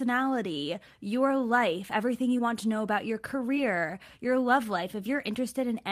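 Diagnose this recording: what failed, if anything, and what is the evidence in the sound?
The failure is in the network stage: short concealed packet loss, twice in this speech clip. The first is at 2.37 to 2.41 s, just after "your life everything". The second is at 3.55 to 3.58 s, just before "your love". Each is a brief smear of about 30 ms. About 20 ms of audio never arrived in time. The receiver's decoder extended the preceding sound for roughly 11 to 12 ms, then blended back into the real signal.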